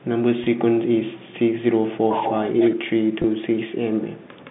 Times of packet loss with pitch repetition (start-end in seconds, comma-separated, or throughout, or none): 0.44-0.46, 3.22-3.24